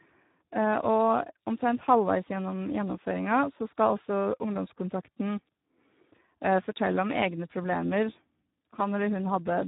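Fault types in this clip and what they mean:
Speex codec: hoarse, noisy speech with nothing above 3.8 kHz throughout; a CELP coder short of excitation bits, consistent with 8 kbps.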